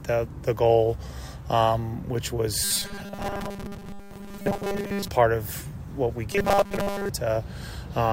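From 2.63 to 5.08 s, and again from 6.33 to 7.10 s, the sound collapses into a stiff, metallic buzz pitched at 200 Hz: robotic sound from repeated short buffers. The likely cause is audio arriving too seldom, so a 5 ms slice is replayed over and over while most of the real signal is skipped. A spectrogram shows flat, evenly spaced harmonic lines every 200 Hz, and the waveform shows identical short cycles repeating.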